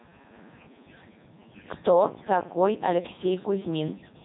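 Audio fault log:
Throughout, Codec 2 vocoder: the speech is heavily robotic and buzzy, with nothing above 3.8 kHz, because the decoder rebuilds it from sine waves using only pitch, voicing, energy and a spectral envelope rather than the original waveform, which fits Codec 2 at 3.2 kbit/s.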